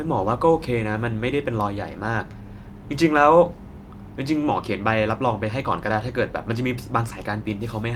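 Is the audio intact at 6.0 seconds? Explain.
Yes, the speech at 6.0 seconds plays through intact, with no audible fault at that moment.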